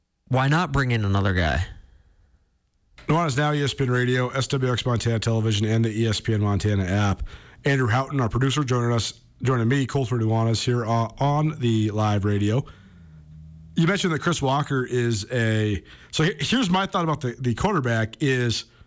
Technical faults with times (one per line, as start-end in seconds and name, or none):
none